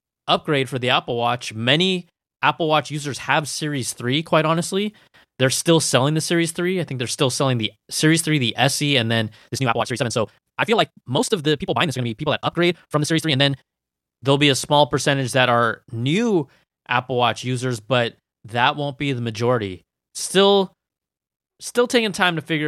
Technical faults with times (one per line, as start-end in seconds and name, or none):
9.33-13.63 time-stretched section